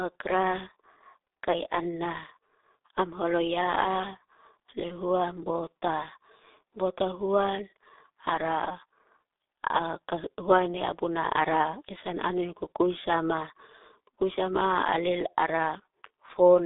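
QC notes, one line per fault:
Throughout: G.723.1 codec. The speech is band-limited to a telephone line of roughly 300 Hz to 3.7 kHz, with nothing above 3.8 kHz, so it sounds muffled and thin. Codec damage is heavy. The coarse vocal-tract model updates only once per 30 ms frame, which leaves the voice hoarse and smears consonant onsets and fricatives. The degree of smearing fits the codec's 6.3 kbit/s mode.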